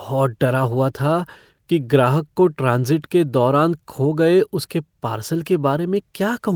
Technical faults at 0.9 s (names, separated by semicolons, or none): none